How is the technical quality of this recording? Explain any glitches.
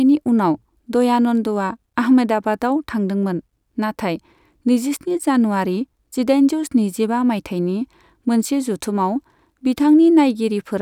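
Nothing in this speech recording catches the ear as a glitch, and there's nothing here that needs explaining.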